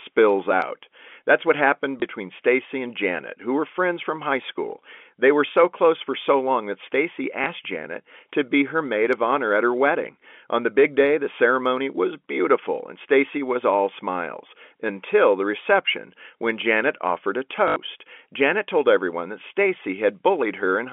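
At 2.00 s, just after "what happened", a small blip breaks the speech. It is packet loss with the last packet repeated: one 20 ms stretch went missing and the previous piece played again. The same blip returns at 7.44 s. The longer gap comes from 17.68 to 17.76 s, after "offered a". That 80 ms run fits four 20 ms packets, so the repeat loops and buzzes near 50 Hz, a short robotic stutter. The narrow telephone band of G.711 coding carries through.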